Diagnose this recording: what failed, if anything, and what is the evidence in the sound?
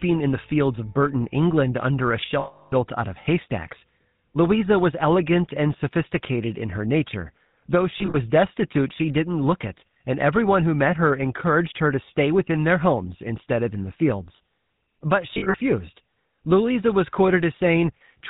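The speech was carried through the GSM full-rate codec, a vocal-tract model driven by a sparse pulse excitation, consistent with its 13 kbps rate. Across the whole clip, nothing comes through above 4 kHz, and the voice has a plainly audible buzzy, gravelly roughness.

Lost GSM frames occurred on the transmission path, and the decoder concealed each gap by reusing the last good frame. From 2.40 to 2.73 s a solid dropout of about 320 ms rings metallically. Scattered, shorter losses come at 7.98 to 8.16 s and 15.34 to 15.56 s. Those gaps are roughly 40 ms at longest and sound like brief rough smears.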